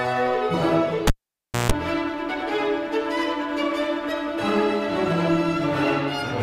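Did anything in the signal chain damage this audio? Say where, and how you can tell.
Yes, in the analogue wiring. At 1.07 s a pop starts a cable pulled and plugged in. Near silence lasts about 0.6 s. A 60 Hz mains buzz of 0.16 s follows as only the tip makes contact. A second pop at 1.72 s restores the sound.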